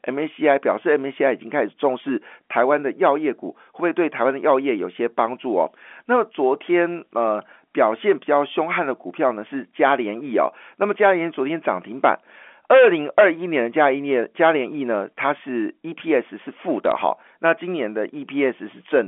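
A brief burst of sharp ticks and crackle sits over the speech from 16.85 to 16.92 s, caused by bit errors on a digital phone line. Flipped bits in the telephone-coded stream corrupted individual samples across a handful of frames, at a rate of roughly one bit in several hundred.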